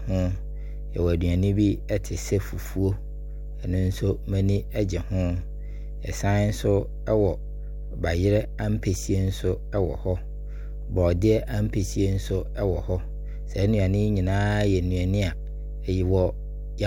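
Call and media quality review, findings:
Mains hum, present throughout. Steady 50 Hz tone with low harmonics under the speech, only about 10 dB below it. Probable ground loop or nearby transformer in the capture chain. Power-line field coupling into the signal path.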